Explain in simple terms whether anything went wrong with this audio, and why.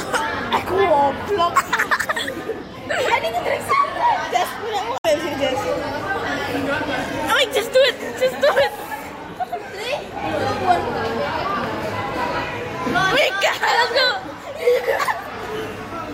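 At 4.95 to 5.06 s there is a short burst of damaged data in a compressed stream. A tenth of a second of the stored file was corrupted, so the player misread those frames and lost its place, producing a brief garbled blip before recovering.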